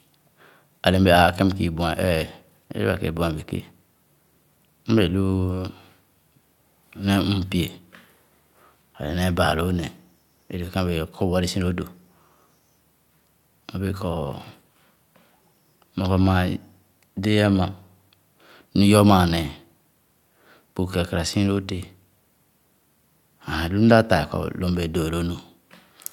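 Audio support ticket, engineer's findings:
No audible faults found in this speech recording.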